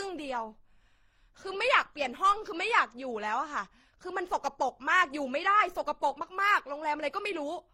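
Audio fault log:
throughout, transcoding between lossy codecs: the speech was likely re-encoded through several lossy codecs, pointing to MP3, Opus, then HE-AAC, so mixed smearing and swirling artefacts stack up over a dulled top end.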